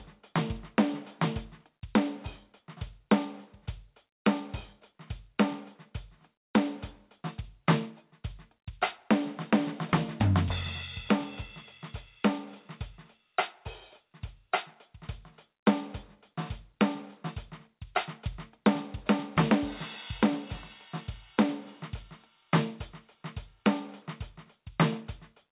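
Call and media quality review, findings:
Gain pumping, throughout the music. Loud and soft parts sit closer in level, with the level swinging by around 10 dB and the dynamics squashed. Likely cause: input gain far too hot, with a fast limiter/compressor clamping every peak. The band tops out near 4 kHz, which fits the G.711 mu-law call leg.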